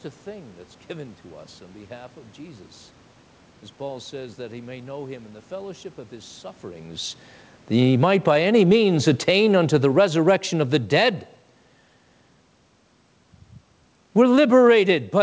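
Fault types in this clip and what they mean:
Automatic gain falling: The automatic gain control judged the input too loud, or its background noise too strong, and turned its gain down gradually. The level sinks three times. From 7.88 to 8.29 s it drops about 7 dB in a quick slide. From 9.11 to 11.12 s it falls about 8 dB over a longer stretch. From 14.03 to 14.86 s it eases down about 5 dB. Each time the room noise sinks with the speech, so the whole sound recedes.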